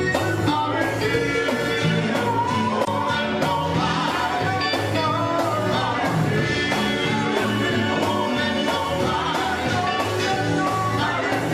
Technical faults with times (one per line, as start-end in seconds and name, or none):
2.81-2.88 damaged data in a compressed stream